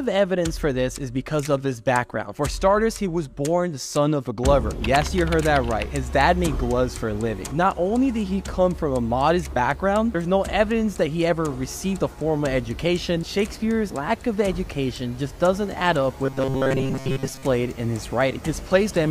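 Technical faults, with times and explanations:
16.24 to 17.43 s, robotic sound from repeated short buffers: for about 1.2 s the sound turns into a rigid, metallic buzz pitched at 134 Hz, which still roughly tracks the underlying contour. The likely cause is audio arriving too seldom, so the software loops a slice of about 7.5 ms, one period of that buzz, over most of the stretch while fresh material is skipped. Unlike a dropout or stutter, nothing falls silent or jumps audibly; a fixed pitch is imposed instead.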